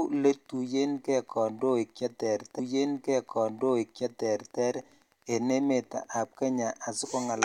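From the first moment to the end, a faint, steady ticking runs under the speech, about 40 dB below it, repeating every 102.4 ms, close to ten ticks a second. This is Wi-Fi interference: a nearby radio's beacons are rectified by the audio circuit. That exact, regular rate separates it from mains hum or a GSM buzz.

At 2.58 s, just after "kandoik che", a stream segment is repeated. The player queued the same stretch twice, so about two seconds of speech replay through 4.58 s, preceded by a small blip at the jump back, adding 2.0 s. A whole segment returns, unlike a stutter's rapid tiny loops.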